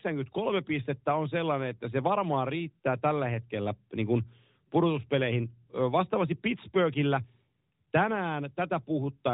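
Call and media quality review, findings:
No faults found in this speech clip. The AMR narrowband mobile codec path is audible as a band limit, with nothing above about 3.8 kHz and light codec coloring consistent with a 12.2 kbps mode.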